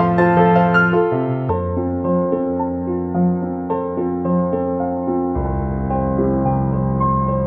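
A music clip where, from 1.49 s to the end, the sound abruptly drops to a sluggish, deep version of itself, about seven semitones lower: a section at the wrong speed, playing at 0.68 times normal, likely from being resampled or clocked at the wrong rate.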